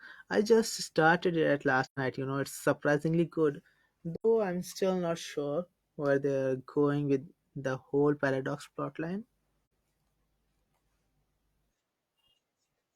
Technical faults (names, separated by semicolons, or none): AAC frame loss with muting